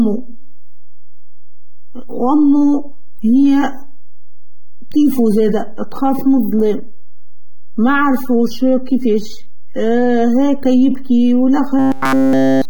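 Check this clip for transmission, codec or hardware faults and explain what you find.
Yes, there are a few problems here: a DC offset running the whole way through, codec damage that's plainly audible throughout, and two stretches of robotic buzzing in the speech.

DC offset, start to finish. The whole waveform sits shifted off zero by a constant amount. You won't hear it as a sound in itself, but it eats into headroom, so peaks clip sooner than they should, and it shows up as a steady lump of energy right at the bottom of the spectrum. It's worth high-passing or re-centring before any further processing.

Compression damage, also throughout, most likely from AAC compression (AAC-LC) at a low bitrate, somewhere around 27 kbps judging by how it sounds. The coder is clearly starving some bands, quantising them coarsely or leaving gaps. That gives the speech a dull, smeared quality, with a watery, fizzy edge on sustained sounds and sibilants. 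You can hear it plainly without hunting for it.

Robotic sound from repeated short buffers, from 0.38 to 1.5 s and again from 11.79 s to the very end at 12.70 s. The speech turns into a rigid, metallic buzz at 133 Hz that only loosely tracks what's being said. That's the likely signature of audio arriving too late: the playback side keeps looping the last tiny chunk, which fits a buffer of roughly 7.5 ms, while the real signal gets skipped. In both stretches essentially everything is repeats.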